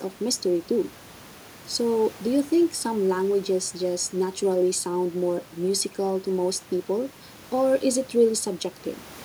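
No technical faults can be heard anywhere in the recording; the signal stays intact and continuous throughout.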